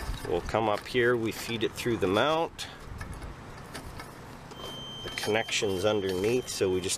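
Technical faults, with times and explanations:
4.48 to 6.98 s, feedback whistle: from about 4.5 s right through to the end, a thin, steady tone at 3.1 kHz sits behind the sound, roughly 15 dB under it, swelling and fading slowly in level as it goes. That's most likely a speaker-to-mic loop parked right on the edge of feedback, so one high frequency keeps ringing but never quite takes off into a full howl.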